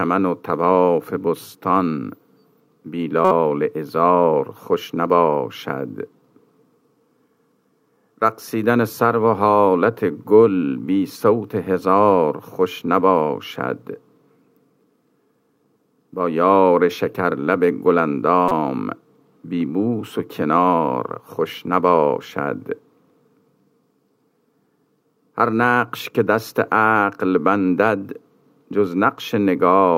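At 3.25 to 3.32 s and again at 18.48 to 18.52 s, a corrupt frame was decoded. Flipped bits in a couple of compressed frames each time were played anyway, so misread gains and codes put energy at wrong frequencies. Each is heard as a short chirpy burst of noise, the first the stronger, the second about 5 dB lower. On a spectrogram each shows as a brief vertical smear unrelated to the surrounding sound; the waveform shows a sudden dense spike.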